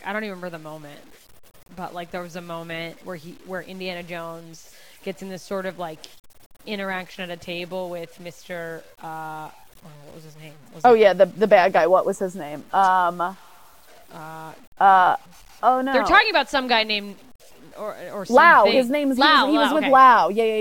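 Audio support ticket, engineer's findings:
Low bit depth without dither, whole clip, 0 to end. Gritty, grainy distortion riding on the speech, worst on quiet tails and soft syllables, which sputter or drop out between steps. Error tracks the signal, about 35 dB down. Sounds like a truncation to 8 bits with no dither, likely a bad conversion stage. Check the export or format settings.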